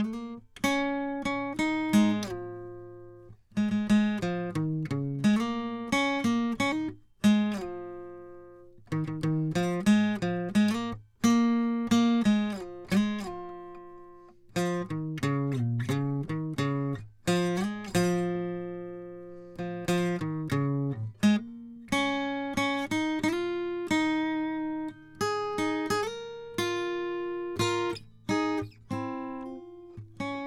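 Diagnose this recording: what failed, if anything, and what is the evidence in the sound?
Nothing failed: no stage in the chain leaves an audible mark on the music, so there's no evidence to trace.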